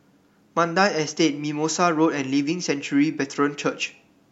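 Nothing stood out on listening to the speech in this recording.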